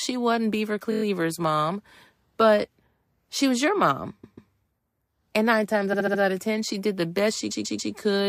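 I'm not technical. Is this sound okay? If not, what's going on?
No. The speech stutters in four places because of repeated frames: a short slice of the recording plays several times in a row. This happens at 0.91–1.02 s, just before "mom but"; at 4.23–4.51 s, after "she was your mom"; at 5.92–6.20 s, between "nine times" and "out of"; and at 7.50–7.92 s. The repeated slices last from about a fortieth of a second to about a seventh of a second, and together they make the clip about a second longer.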